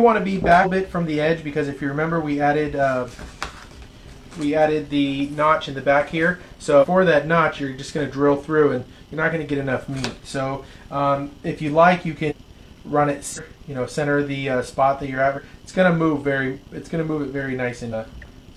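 Compressed frames were skipped six times: whole blocks of the encoded stream, in steps that fit a frame of about 46.4 ms, never reached the output, so playback jumps forward. The jumps come at 0.61, 6.78, 12.26, 13.33, 15.33 and 17.88 s, each dropping a few tenths of a second, with the one at 6.78 s losing about a second.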